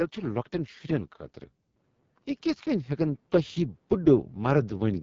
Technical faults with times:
0.00-5.02 AMR wideband (HD Voice) codec
2.63-4.98 automatic gain rising

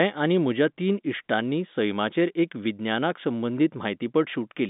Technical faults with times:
none

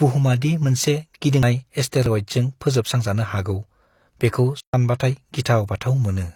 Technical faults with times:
1.43 CD skip
2.06-2.10 overlap between stream segments
4.60-4.74 playback stall

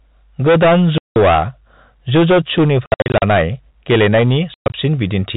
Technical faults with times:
0.00-5.36 hard clipping
0.98-1.16 packet loss filled with silence
2.86-3.22 packet loss filled with silence
4.54-4.74 packet loss filled with silence

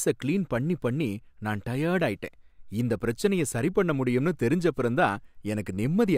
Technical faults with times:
none

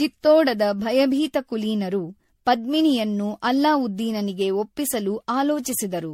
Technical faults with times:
0.00-6.13 generation loss

